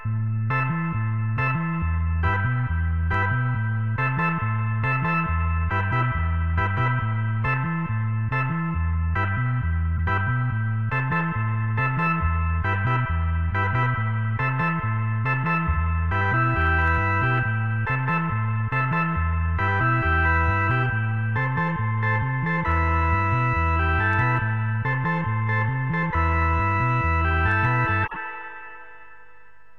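Corrupt frame decoded at 9.97–10.00 s and 28.02–28.17 s: the audio bursts into brief squeaky noise, peaking near -15 and -20 dBFS, as damaged compressed frames, a couple and then several, are played despite flipped bits, throwing energy into wrong frequencies.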